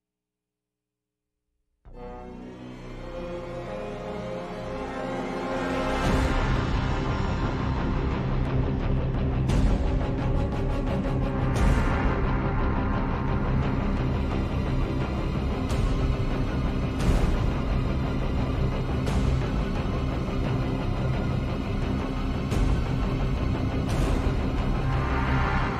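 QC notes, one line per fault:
15.98 s, compressed frames skipped: about three whole frames of the coded stream were never played, either missing or rejected by the decoder as damaged. The audio jumps ahead roughly 70 ms, and overlapping 26.1 ms frames smear the join into a soft blip.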